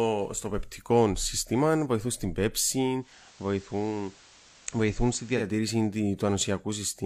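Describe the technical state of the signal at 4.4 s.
At 4.4 s the signal is in the middle of a digital radio blend to analogue, running from 2.98 s to 5.50 s. The receiver lost the digital stream and cross-faded over about 160 ms to the station's FM broadcast. The level sits about 2 dB lower, and FM hiss is present at roughly 25 dB below the signal until the return to digital at 5.50 s.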